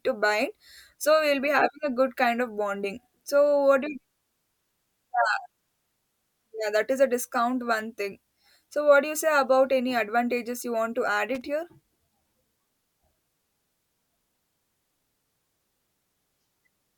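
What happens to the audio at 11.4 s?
A loose connector briefly loses and regains contact between 11.35 and 11.42 s, chopping the speech signal on and off and letting any DC on the line jump in as pops. The result is a short, irregular burst of loose connector crackle lasting about 70 ms.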